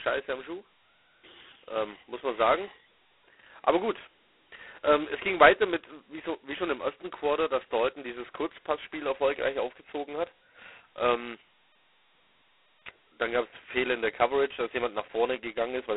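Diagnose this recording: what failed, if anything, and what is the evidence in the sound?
The codec stage failed: the speech went through G.726 ADPCM at its lowest rate, which the heavy damage points to being the 16 kbit/s mode. Only two bits per sample leave a harsh, rasping hiss that rises and falls with the speech throughout, inside a 300 Hz to 3.4 kHz band with nothing above 3.9 kHz.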